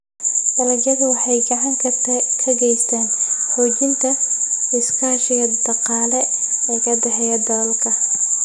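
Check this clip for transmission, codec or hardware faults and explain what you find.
No transmission, codec or hardware faults are audible anywhere in the clip.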